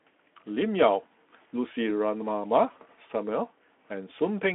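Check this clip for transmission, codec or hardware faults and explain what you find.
Nothing here points to a transmission, codec or hardware fault, so there's really nothing to flag in this speech clip.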